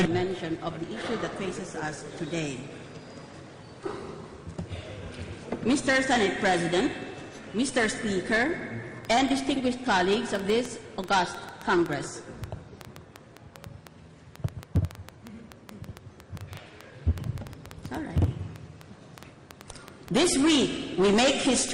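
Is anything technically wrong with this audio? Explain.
Yes, there's a train of clicks from 9.05 s to 21.7 s: around 70 similar pulses at about 5.5 per second, irregularly spaced and around 10 dB above the sound. It's likely interference, a faulty connection or a power supply. It's heard as popping throughout, pauses included.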